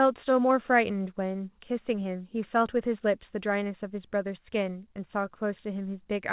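No technical faults can be heard in this speech recording. It carries the narrowband sound of a WebRTC call path, with nothing above about 4 kHz, which fits a G.711 mu-law codec at 64 kbps.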